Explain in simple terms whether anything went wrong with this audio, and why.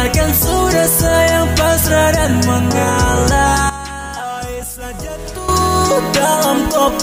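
Something did go wrong. At 3.70 s the whole sound suddenly drops in level. It stays much quieter until 5.49 s, then jumps straight back up. The background noise drops and returns at exactly the same moments. Nothing fades in or out. This is a sudden gain jump. The likely cause is a volume setting that was changed instantly, from one sample to the next, with no gradual ramp.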